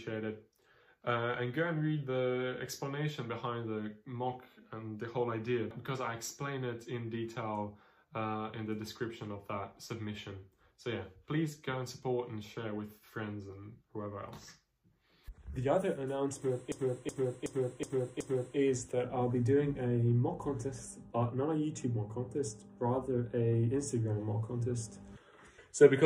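A system hang loop runs from 16.72 to 18.58 s. The system stalled while the playback hardware kept replaying its buffer, so one 372 ms slice repeats five times at about 2.7 per second, a stuttering loop that fits a 16384-sample buffer.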